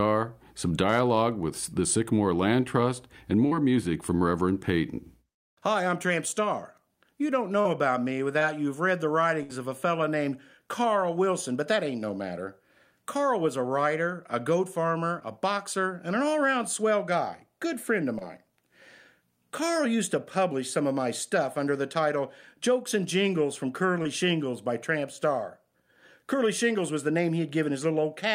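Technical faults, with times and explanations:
3.47–3.53, 7.61–7.67, 8.39–8.43, 15.19–15.23, 18.19–18.23 and 24.03–24.07 s, short concealed packet loss: about 20 to 40 ms of speech never arrived in time each time. The decoder extended the preceding sound and blended back, giving a brief smear or wobble just before "music from", between "about me" and "you've read the", and right after "guy good friend of". A spectrogram shows a short patch of unnaturally steady harmonics or smooth noise, and the waveform shows a slight seam where real audio resumes.
9.43–9.51 s, burst of packet loss: roughly 60 ms went missing in one run. The receiver stretched the last sound across the gap and turned it down as it went, producing a held buzz or fading hiss that sags in level before speech picks up further along, with that stretch absent. A spectrogram shows flat, frozen harmonic lines or smooth noise fading out, and the waveform shows a decaying envelope followed by an abrupt restart.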